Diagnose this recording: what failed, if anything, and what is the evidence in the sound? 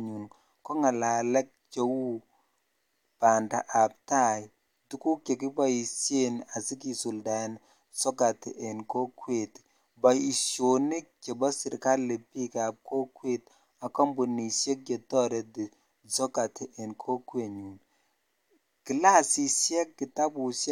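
Nothing in this speech recording points to a failure at any stage of the chain, so there's nothing here to diagnose.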